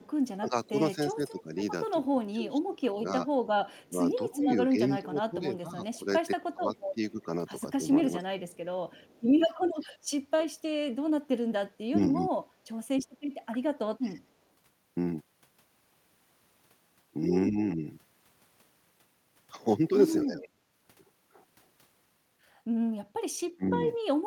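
A faint, delayed copy of the speech trails about 247 ms behind at 0.02–0.66 s and 3.68–9.22 s: echo leak, likely from a far-end echo canceller letting loudspeaker pickup through. The speech also dips and drops in pieces, by up to about 15 dB over roughly four seconds between 0.39 and 14.24 s and by up to about 35 dB in brief cuts totalling under a second between 17.5 and 23.79 s. This is speech suppressed in double talk, likely caused by the echo canceller turning down the talker while both sides spoke at once.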